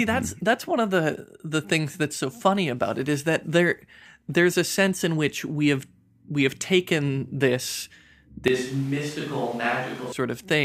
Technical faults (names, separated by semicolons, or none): switch to a distant microphone